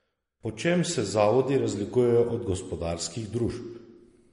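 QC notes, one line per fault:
throughout, MP3 compression: flat spectrogram ceiling at 10.6 kHz, flickering holes below, watery swirly speech; likely a bit-starved encode, fitting about 40 kbps.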